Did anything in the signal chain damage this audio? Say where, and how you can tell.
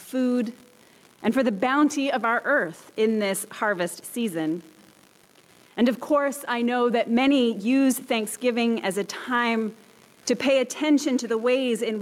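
Yes, gain pumping throughout: the gain swings about 5 dB, pulling down under loud sounds, likely an over-driven input with a fast limiter, unlike a gate's hard cut-off.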